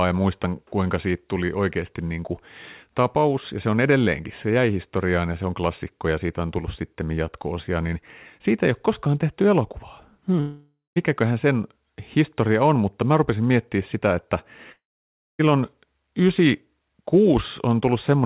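At 10.40 to 10.98 s and again at 14.72 to 15.41 s, the speech smears into a fading buzz that decays to silence, far longer in the second gap, then resumes with roughly 0.56 s and 0.68 s missing. This is likely a long network dropout on the 4 kHz-limited call line.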